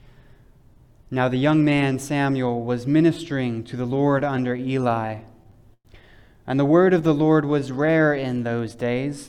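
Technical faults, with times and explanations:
3.97–5.87 s, repeated stalls (stutter): Packets reached the receiver late or more slowly than they were played out, so the jitter buffer kept running dry. Each time, the receiver stretched the last bit of sound to cover the wait before carrying on. Sixteen such holds add about 263 ms, roughly a seventh of this stretch, with the longest lasting 111 ms. Nothing is lost, but the audio halts and restarts in a dragging, stuttering rhythm.
6.71–8.28 s, jitter buffer slow-down: The jitter buffer was low or had just raised its target delay, so the receiver built up a reserve by repeating single pitch periods and fragments of pauses many times over. This adds 146 ms and plays the passage at 91% of its normal speed. The pitch does not change, but the sound is slowed and drawn out, with lengthened sustained parts.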